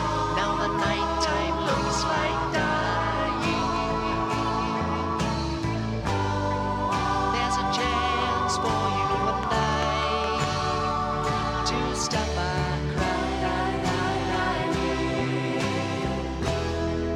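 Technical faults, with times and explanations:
9.43 to 10.45 s, train of clicks: A run of sharp ticks sits on top of the sound for about one second. They arrive at a steady pace of about five per second, some seven in all. Each click has much the same shape. They stand out clearly, peaking roughly 15 dB above the surrounding audio. Such even, repeated pulses point to something injecting energy into the signal path, likely interference from nearby equipment or a faulty connection or power supply.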